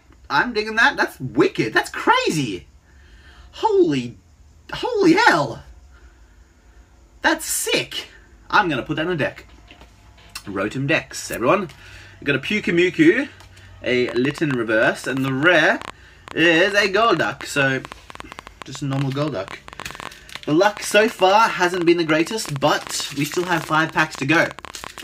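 At 14.09 s a train of clicks begins and runs to 24.99 s. Around 150 sharp, similar pops arrive unevenly, near 11.8 per second. They peak well above the sound, by roughly 10 dB. The likely cause is electrical interference or a faltering interface.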